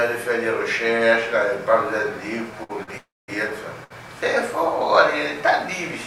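Short stalls from a late packet occur at 2.63 to 2.71 s, 2.83 to 2.89 s and 3.84 to 3.92 s. Each time, the jitter buffer ran dry and the last sound was stretched for 59, 42 and 64 ms before the audio resumed where it left off. Each stall is heard as a brief held sound with a slight buzz or dip. On a spectrogram it shows as short flat horizontal smears, and nothing is cut out.

A call audio freeze comes between the second and third stalls, from 2.97 to 3.30 s, likely because packets were held up in transit and the buffer emptied again. The held sound fades into about 210 ms of silence, inserting a 305 ms pause. The waveform shows a decaying tail and then a flat line before the audio picks up unbroken.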